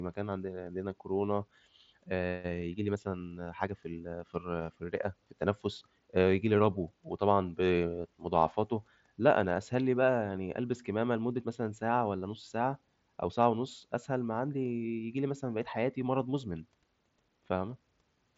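No faults are present: the speech comes over a Bluetooth mSBC headset link, with the band ending near 7.7 kHz and only the light graininess that codec leaves on louder passages.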